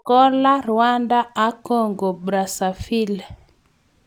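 Right through the speech there's imaging from linear upsampling, which fits a 22 kHz source stretched to 48 kHz with straight-line interpolation. The top end sounds dulled, and a faint mirrored copy sits roughly 35 dB down between about 11 and 22 kHz, giving sibilants a light metallic shimmer.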